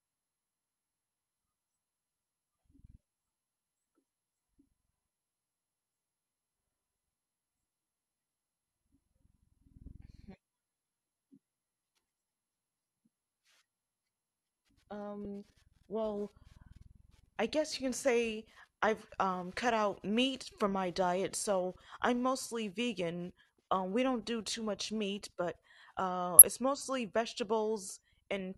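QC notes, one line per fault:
15.25 s, damaged data in a compressed stream: a very short blip in the speech. Bad data reaches the decoder here. It misreads the frame, loses sync and hunts for the next frame header.
26.39 to 26.42 s, damaged data in a compressed stream: a brief glitch, about 34 ms long, between "much meat but uh" and "it's mostly". Corrupted data breaks decoding the same way. The decoder misreads the frames before it regains sync.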